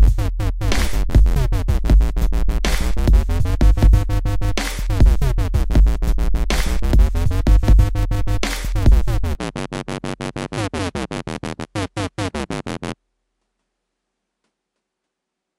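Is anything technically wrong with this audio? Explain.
Yes. From 9.35 s to the end, the input was likely switched to a poorer device partway through the recording. Instead of the original capture path, a second pickup with a narrower response takes over. With no gap at the change, the sound abruptly becomes duller and a little boxier, loses everything above 11.4 kHz, drops roughly 5 dB in level, and gains a faint background noise of its own that sits well beneath the sound.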